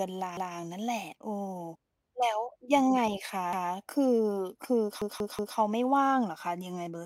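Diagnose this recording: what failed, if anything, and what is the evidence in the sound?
The speech stutters: a 186 ms chunk repeats with hard joins at 0.37–0.56 s and 3.53–3.72 s, then plays three extra times at 5.02–5.57 s. This is a repeated buffer at the driver or buffer stage. Fresh audio arrived late, so the device replayed its last block, which fits an 8192-sample buffer.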